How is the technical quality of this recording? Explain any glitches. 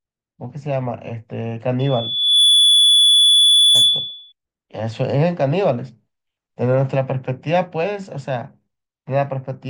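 The recording has one clear glitch. Loudspeaker feedback squeal runs from 1.79 s to 4.32 s: the microphone hears its own loudspeaker, and around 3.4 kHz the loop gain passes one, so a piercing tone swells within a second to about 10 dB above the speech.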